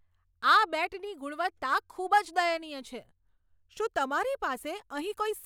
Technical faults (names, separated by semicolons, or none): none